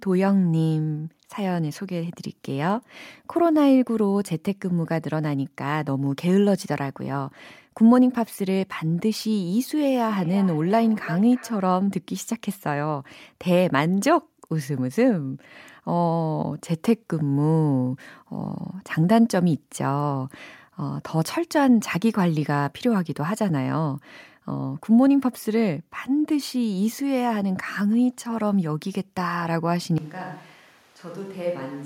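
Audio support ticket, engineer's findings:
Feedback echo between two devices, 9.76 to 11.69 s: speech returns about every third of a second, thinner and ringing, peaking about 17 dB below speech. Spectrogram shows evenly spaced, fading copies of each syllable.

From 29.98 s to end, level drops roughly 10 dB, tone turns hollow and roomy, bass thins, room noise about 25 dB under speech; likely a switch to a distant microphone. Waveform shows an abrupt step down.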